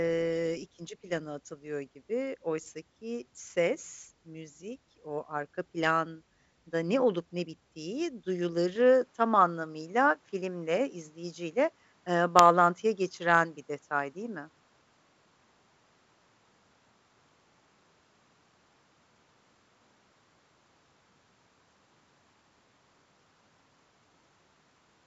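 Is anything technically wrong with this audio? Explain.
Yes. From 8.76 s to the end, the speech changes character, most likely because the input switched to a poorer device. The level shifts by about 5 dB and a new background noise floor appears, roughly 50 dB below the speech, with no gap at the switch. The working G.722 coding passes nothing above about 7.7 kHz, so the change is heard as a different tone and noise. A simple gain change would alter loudness alone, without the new colouring and noise floor.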